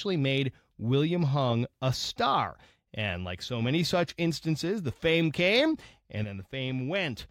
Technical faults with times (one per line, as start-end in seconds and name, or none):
6.24-7.30 sudden gain jump